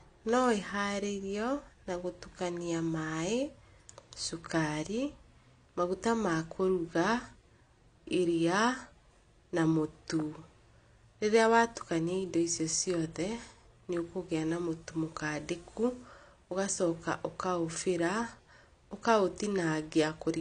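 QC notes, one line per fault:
Throughout, AAC compression: a low-bitrate AAC-LC encode, likely about 32 kbps, removes everything above 9.8 kHz, so the speech sounds dull with plainly audible coding damage.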